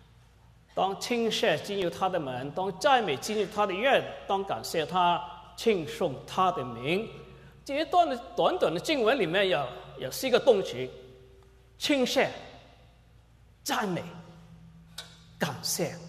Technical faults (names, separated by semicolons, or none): block of digital silence